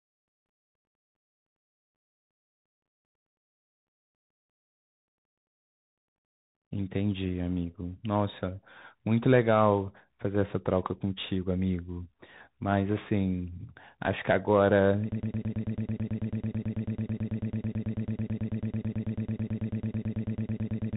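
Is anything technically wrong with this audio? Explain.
Yes, there are two faults. Throughout the clip the speech carries a Bluetooth CVSD headset codec signature. Nothing above about 3.8 kHz gets through, which fits a 64 kbps CVSD link. The one-bit delta modulator's adaptive step can't follow fast, loud high-frequency content, so sibilants turn scratchy and a granular hiss sits under the speech.

From 15.12 s to the end of the clip there is a broken-record loop. A fragment of about 110 ms repeats back to back, identically, more than fifty times. The speech that should have filled that stretch is missing. The likely cause is a stalled player, encoder or stream that kept outputting the last buffer it held.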